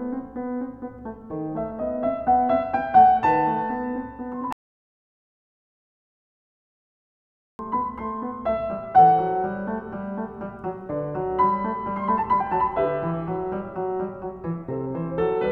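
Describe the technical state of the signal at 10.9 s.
At 10.9 s the music plays through intact, with no dropout, click, distortion or other fault in the signal at that moment.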